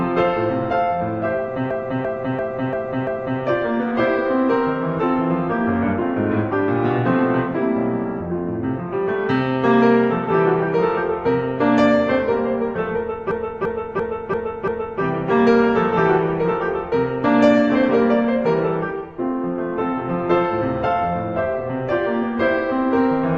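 A stuttering, machine-gun repeat of the same 0.34 s fragment, cycling about 2.9 times per second, fills 1.71 to 3.41 s and again 13.31 to 15.02 s. Each is a system hang loop: while the system froze, the hardware replayed one buffer, which fits a 16384-sample ring buffer.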